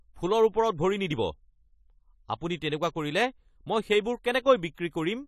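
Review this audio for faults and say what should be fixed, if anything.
The speech has been through a low-bitrate perceptual codec, most likely AAC compression of the AAC-LC kind, starved of bits so that the quantiser discards detail it judges inaudible. Across the whole clip this leaves nothing above 14.1 kHz and plainly audible codec damage: a dull, smeared top end with a watery, fizzy edge on sibilants, which fits a bitrate of around 32 kbps. To prevent it, encode at a higher bitrate or keep a lossless master for review.

Pre-echo occurs from 4.74 to 4.78 s. A sharp attack falls late in a transform block, and the codec spreads quantisation noise sized for that loud moment evenly across the whole block, including the quiet stretch before it. This is heard as a short hiss about 32 ms ahead of the onset, and the attack itself lands softened and smeared rather than crisp. To prevent it, give the encoder more bits or use one with effective block switching for transients.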